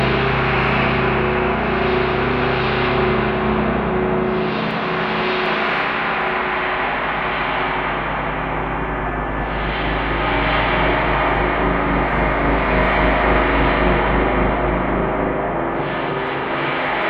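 From 6.86 to 10.65 s, timecode bleed from a neighbouring line leaks in, adding a faint chirping warble around 1 and 2 kHz, far beneath the sound.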